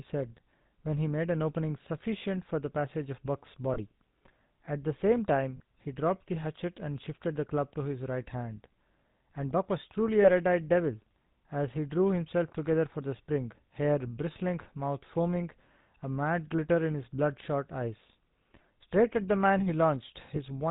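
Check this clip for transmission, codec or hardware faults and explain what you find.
Two problems turn up here: the whole recording has been through the GSM full-rate codec, and there are four short dropouts where lost GSM frames were patched over.

GSM full-rate codec damage is plainly audible from start to finish. The coder rebuilds speech from a vocal-tract model fed by sparse, evenly spaced pulses, and it cuts everything above 4 kHz. That gives this speech its dull, buzzy, gravelly texture, which fits the 13 kbps full-rate coder.

The lost GSM frames come at 3.74 s (about 20 ms), 5.56–5.61 s, 10.22–10.30 s and 20.36–20.42 s. Each time, the decoder reused the last good frame's settings, so the sound briefly hangs on a rough, metallic ring. Those lengths fit one or two missing 20 ms frames.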